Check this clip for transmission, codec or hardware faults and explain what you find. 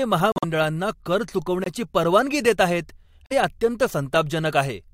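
Three dropouts from corrupt frame muting. At 0.32–0.44 s, 1.64–1.67 s and 3.26–3.32 s, the decoder rejected damaged compressed speech frames and the player inserted silence. Each gap starts abruptly and timing holds.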